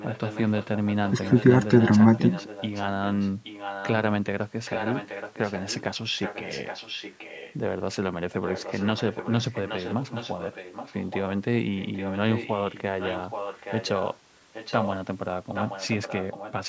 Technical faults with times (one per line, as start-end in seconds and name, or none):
0.00-3.93 echo leak
4.65-5.83 echo leak
6.17-7.54 echo leak
8.45-11.22 echo leak
11.76-14.16 echo leak
14.53-14.97 echo leak
15.54-16.68 echo leak